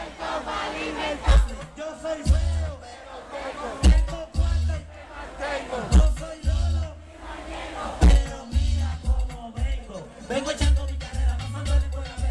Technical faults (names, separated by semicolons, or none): none